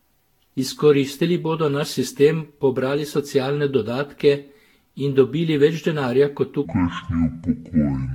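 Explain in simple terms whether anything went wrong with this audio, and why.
Two things went wrong. Throughout the speech, the recording was likely saved in a compressed format, opened and saved again around ten times over. That is generation loss. Each round throws away a little more detail in a slightly different place, and the damage piles up. The result is a swirly, hollow, smeared sound, with the starts of sounds blurred instead of crisp.

Second, from 6.65 s to the end at about 8.15 s, just after "dobili več denarja kot", a section is at the wrong speed. Something likely played that last stretch on the wrong clock, at about 0.58 times its proper speed. Because speed and pitch move together, the voice there drags slowly and drops deep, roughly ten semitones lower than before.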